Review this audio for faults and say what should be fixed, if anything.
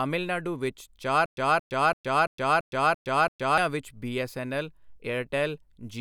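From 1.26 s to 3.58 s the speech breaks into a stutter with silent gaps: the same 223 ms fragment plays seven times, each followed by about 115 ms of digital silence, repeating every 337 ms. The likely cause is a stalled player re-sending its last buffered fragment on each retry, so the speech meant for that span is lost. On a waveform it shows as identical blocks separated by flat silent stretches; a spectrogram shows matching vertical stripes between blank columns. Larger buffers and a player that pauses cleanly on underrun, rather than looping stale data, would prevent it.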